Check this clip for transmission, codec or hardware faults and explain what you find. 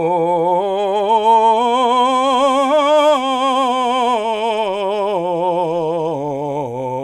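No faults can be heard anywhere in this music.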